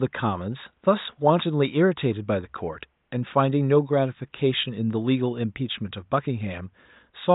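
No technical faults can be heard in this speech, only quiet room noise about 51 dB below the voice.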